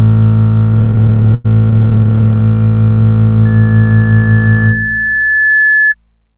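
Music heard over a narrowband call path with nothing above 4 kHz, which points to G.711 coding. From 0.74 to 2.43 s, packets arrive late and the jitter buffer keeps running dry, producing repeated stalls (stutter). The receiver stretches the last sound across dozens of gaps, up to 100 ms each and 468 ms in all, so the music drags and stutters with nothing lost. From 3.45 to 5.95 s, a microphone picks up its own loudspeaker and the loop gain exceeds one at 1.7 kHz, causing loudspeaker feedback squeal. A steady tone swells over about two seconds until it roughly matches the music's level.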